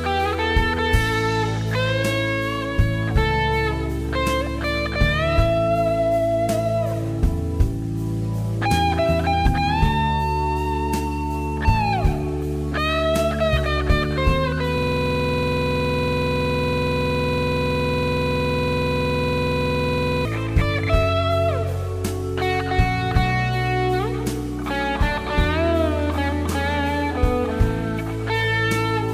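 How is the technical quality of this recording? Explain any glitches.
There is one serious glitch: a system hang loop from 14.78 to 20.25 s. The machine or driver stalled while the audio hardware kept replaying its ring buffer. A 46.44 ms slice repeats over a hundred times at 21.5 Hz, which fits a 2048-sample buffer. It sounds like a rapid, rattling mechanical stutter.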